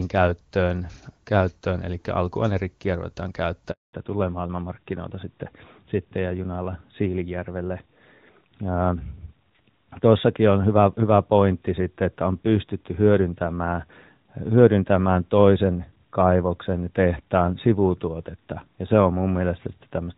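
At 3.71 s the speech fades out within a few tens of milliseconds and stays silent until 3.93 s. That is a 220 ms handover gap, where the call switched networks and no frames arrived. It is a clean hole, unlike packet-loss concealment, which smears or repeats sound. The gap also coincides with a change in tone.

From 3.93 s to the end, the call shows fallback to narrowband. The clear HD Voice sound of the opening, which fits AMR-WB at its top rate, gives way to a duller, rougher narrowband codec with nothing above 4 kHz. A low AMR-WB rate would still keep energy up to about 7 kHz, so this hard 4 kHz ceiling sets it apart.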